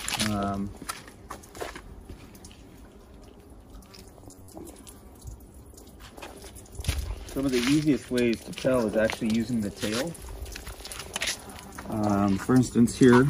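A short stretch of robotic sound from repeated short buffers runs from 4.20 to 4.50 s, a rigid metallic buzz at 93.8 Hz. This is likely buffer underrun concealment looping roughly 10.7 ms segments, with about half the real audio skipped.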